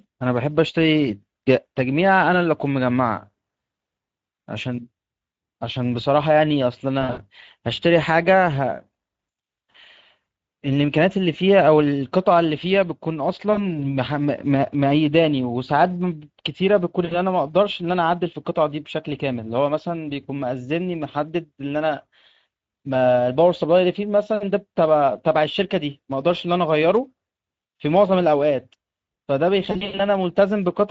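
The whole clip carries Speex codec damage, and it's plainly audible. The speech has that grainy, hoarse CELP texture: the encoder hasn't got enough bits to model the excitation well, so voiced sounds come out rough and a bit noisy. The grain points to a middling Speex setting somewhere in the mid-teens of kbps.

On top of that there are four stretches of VoIP packet loss concealed by the speech codec, where the decoder papers over missing packets by extending its last pitch and filter and letting the level sag. At 7.01 to 7.21 s the voice is stretched out and fades, with the gaps scattered over about 160 ms, which fits roughly six lost 20 ms frames with the longest run near 60 ms. Shorter patches follow at 13.53 to 13.76 s, about 40 ms lost, and at 17.05 to 17.16 s, about 60 ms lost. The worst is at 29.71 to 30.02 s, with about 180 ms missing across 280 ms and one 80 ms run. There the sound stays weak or distorted for a moment after the packets come back.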